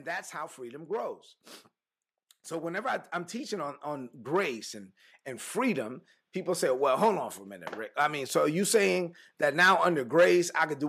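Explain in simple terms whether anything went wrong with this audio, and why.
Something does go wrong, and it's a case of automatic gain rising. From about 2.48 to 4.61 seconds the whole recording slowly gets louder, the talking and the room noise behind it swelling up together. That's the recorder's automatic level control deciding the input was too quiet and nudging its volume up bit by bit over a couple of seconds. By the time the speaker says "and and freedom people", things sit noticeably louder than before.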